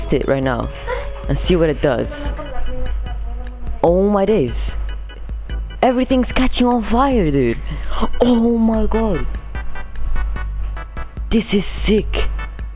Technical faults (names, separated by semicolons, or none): none